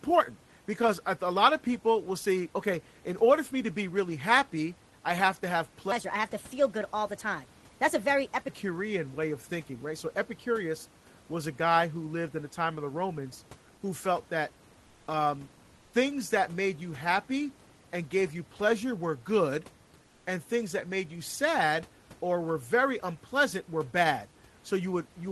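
From 5.92 to 8.48 s, a section at the wrong speed, likely from a playback clock mismatch, runs 1.28 times fast, so the speech rises about four semitones and sounds hurried.

Three times, a sender's discontinuous transmission likely cut the audio and the receiver filled the gap with comfort noise in place of the background. The first is 14.87 to 15.07 s, after "who felt that". The second is 15.75 to 15.91 s, before "things that made you". The third is 20.03 to 20.23 s, after "you pleasure were good". Each time, the room's natural background gives way to a flat, featureless hiss about 2 to 3 dB quieter.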